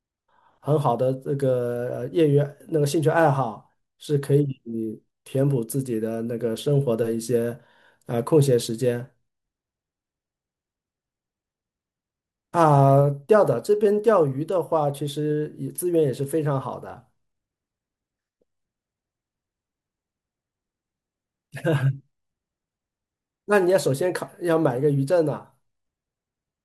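Listening through this speech recording, nothing stood out as a technical fault at any point.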